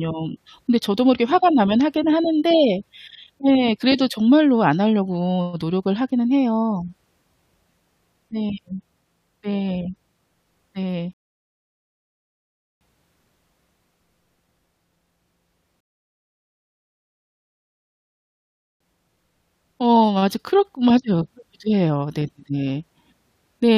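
Speech with two rebuffering stalls, at 11.13 to 12.81 s and 15.80 to 18.81 s. The player ran dry and waited, adding 1.7 s and 3.0 s of silence. Nothing is lost.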